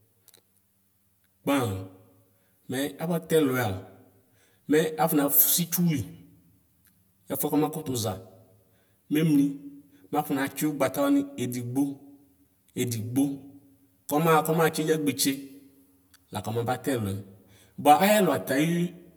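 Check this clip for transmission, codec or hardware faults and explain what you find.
There is one fault, channel delay causing comb filtering, and it runs through the whole speech clip. One channel arrives roughly 10 ms behind the other. When the two are summed to mono, the shared content cancels at regularly spaced frequencies. The first notch falls around 50 Hz, with further notches about every 100 Hz above it. The result is a fixed comb of dips across the spectrum. The speech sounds hollow and phasey throughout.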